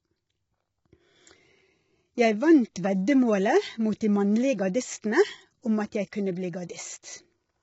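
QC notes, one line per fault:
Throughout: low-delay AAC compression. The speech sounds rough and grainy, with noise filling the gaps between the pitch harmonics and nothing above about 7.7 kHz, so the top band is cut off. The likely cause is AAC-ELD coding at a low bitrate, around 16 kbps. Its short frames can't separate closely spaced harmonics well and use up bits quickly. The coarse quantisation that results smears noise across the spectrum and leaves no room to carry the high frequencies.
6.12 s: pre-echo. A hiss of about 10 ms comes just before a sharp attack, and the onset sounds blunted rather than crisp. The attack sits late within a transform block. The codec spreads that block's quantisation noise evenly across its whole length, so noise sized for the loud transient also covers the quiet instant before it. There the noise is no longer masked and becomes audible as a brief hiss ahead of the attack.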